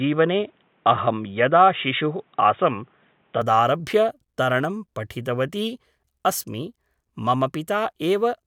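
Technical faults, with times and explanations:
0.00 to 3.42 s, input switched to a poorer device: the speech starts dull and boxy, with nothing above 3.8 kHz and a faint extra noise floor sitting well below the voice. At 3.42 s it opens up cleanly with no gap, and the level shifts by around 5 dB. That pairing of a narrow band with its own noise and gain most likely means the capture began on a lesser microphone or headset profile before switching to the proper input.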